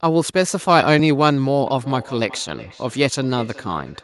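At 1.0 s the speech lurches forward by a tiny amount with no gap or pause around it. The likely cause is a dropped buffer (overrun): the software fell behind, the hardware overwrote a block of samples before they were read, and the audio on either side was spliced together. Only a few milliseconds seem to be missing.

From 1.67 s to the end, each stretch of speech returns as a fainter copy roughly every 400 ms, sounding thinner and more ringing, peaking at about 21 dB below the direct speech. This is feedback echo between two devices. Two devices in the same room are on one call, and one of them plays back what the other's microphone captured. That microphone then picks the playback up again. Each device's echo canceller only removes its own output, so the loop keeps circulating.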